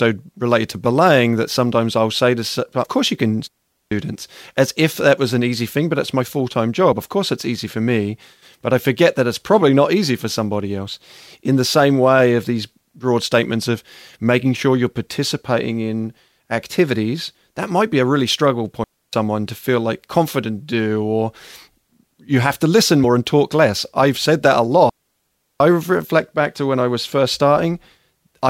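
At 2.84 s, just before "course you can", compressed frames are skipped. About five 26.1 ms frames never play, so roughly 150 ms of speech vanishes.

From 3.48 to 3.92 s, right after "course you can", a digital wireless dropout mutes the sound for 435 ms. The receiver has lost too much data. It fades out fast and leaves a clean, near-silent hole with no noise burst.

At 6.91 s, after "it's my full time", another frame skip drops about one frame, some 30 ms.

A 292 ms dropout follows from 18.84 to 19.13 s. It is the same clean gap.

At 23.03 s, about two frames are skipped, roughly 50 ms.

The longest dropout runs from 24.89 to 25.60 s and silences 710 ms.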